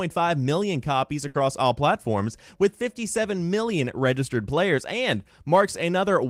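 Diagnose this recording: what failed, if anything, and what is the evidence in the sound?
The network stage failed, with a burst of packet loss from 1.27 to 1.40 s. For about 70 ms the receiver conceals the gap by extending the last sound it received and letting it fade, so the speech turns into a decaying continuation rather than going silent. When real audio returns, roughly 60 ms of the original speech is simply gone, and the talk picks up further on with that stretch skipped.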